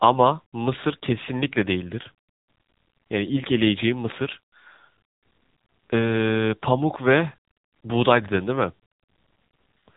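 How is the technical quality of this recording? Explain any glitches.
The technical quality is limited by plainly audible narrowband codec damage across the whole clip. Throughout, the speech carries the AMR narrowband mobile codec signature. The codec samples at 8 kHz and rebuilds the voice from a vocal-tract model excited by a sparse set of pulses per subframe, so content above about 3.8 kHz is gone. The degradation is plainly audible: the speech sounds muffled, buzzy and synthetic, which points to an AMR-NB mode of roughly 7.95 kbps.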